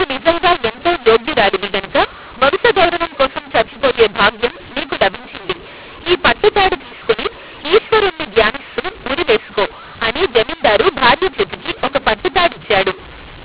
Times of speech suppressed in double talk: none

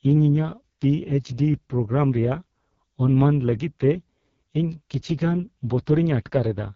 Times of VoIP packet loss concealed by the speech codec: none

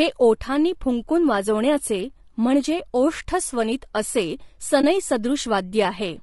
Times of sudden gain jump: none

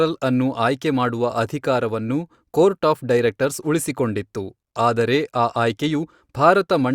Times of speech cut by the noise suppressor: none

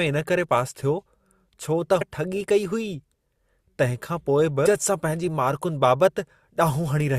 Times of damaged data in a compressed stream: 2.00

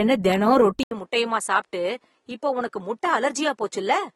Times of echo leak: none

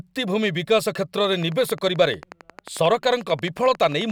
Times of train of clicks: 1.24-4.11

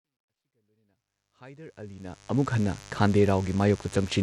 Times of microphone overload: none

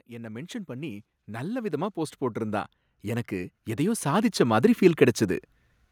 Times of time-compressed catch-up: none

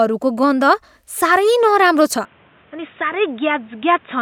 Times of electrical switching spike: none

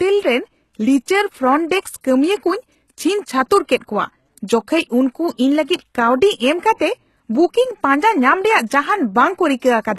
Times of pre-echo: 2.01-2.04, 6.74-6.79, 8.66-8.70

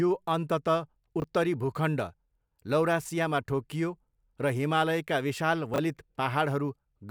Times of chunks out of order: 1.20-1.24, 5.74-5.78

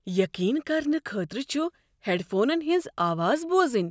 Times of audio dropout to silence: none

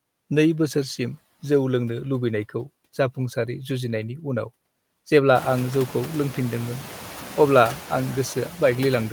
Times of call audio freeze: none

